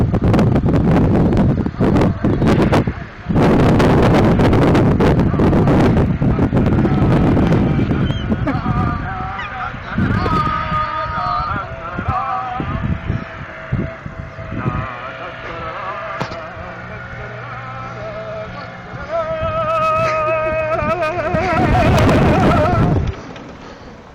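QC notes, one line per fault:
Throughout, hard clipping: the signal is driven about 27 dB past full scale, so roughly one sample in seven is flattened, giving harsh fuzz on every loud passage.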